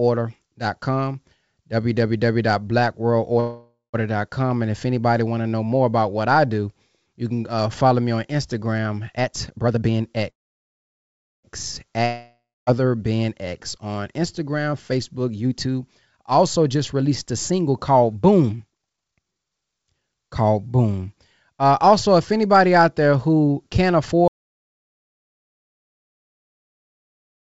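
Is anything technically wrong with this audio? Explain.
Yes, there are several faults, all of them the sort a live call picks up. The audio came through a call path whose codec leaves nothing above 8 kHz, so the top end is dull throughout, but that's the normal character of that kind of link, not a fault.

Call audio freeze, at 3.40 to 3.96 s and 10.30 to 11.45 s. The speech stalls and the last sound is stretched into a fading buzz, likely because packets were held up and the jitter buffer ran empty. The first gap is about 0.54 s and only briefly goes quiet. The second lasts about 1.13 s and is nearly all silence. Nothing is lost either time. The talk just picks up where it left off, later than before.

Jitter buffer speed-up, at 9.17 to 10.17 s and 14.58 to 20.42 s. After the backlog built up, the receiver trimmed tiny pitch-period slices over and over to catch up. The first stretch runs at 143% and loses around 0.4 s, so it sounds clearly rushed. 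The second is a gentler 121% over nearly six seconds and trims about a second in total. The pitch stays put, so it just sounds hurried.

Long network dropout, at 12.05 to 12.69 s. Here audio likely never arrived at all. The receiver fills about 0.61 s with a tail that fades, then goes quiet for roughly a quarter second. When the speech returns, about 0.62 s of it is simply gone.

Audio dropout to silence, from 24.28 s to the end of the clip. The sound cuts out mid-flow into dead digital silence with no room tone at all, which points to the input likely being lost or muted while recording carried on. Nothing after that point survives.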